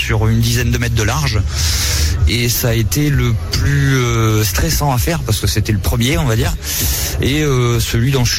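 No technical faults can be heard anywhere in the recording, and the signal holds steady throughout.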